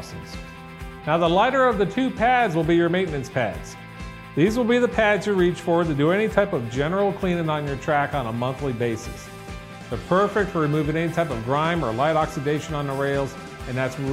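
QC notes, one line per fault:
No faults heard in this clip.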